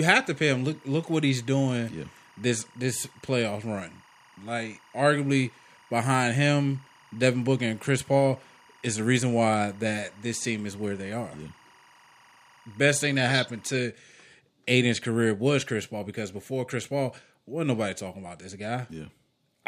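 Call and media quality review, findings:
Timecode bleed, 0.00–13.78 s: 24 fps timecode leaking from an adjacent track or cable into the speech. Steady chirping warble around 1 and 2 kHz, about 30 dB below the speech.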